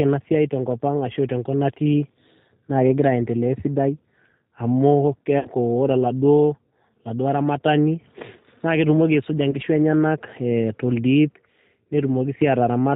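Throughout, the speech has passed through the G.729 codec, which discards everything above 4 kHz and rebuilds each 10 ms frame from a filter, a pitch predictor and a few pulses. The result is plainly audible: narrow, slightly rough and synthetic, consistent with an 8 kbit/s voice link.

From 5.39 to 5.49 s, VoIP packet loss concealed by the speech codec removes about 60 ms of audio, which suggests two packets. The decoder stretches its last pitch and filter into a fading buzzy tone or coloured noise. From 9.51 to 9.60 s, a shorter 30 ms gap, likely a single packet, is bridged the same way, and the speech stays weak or distorted just as "enyenak toldip" begins.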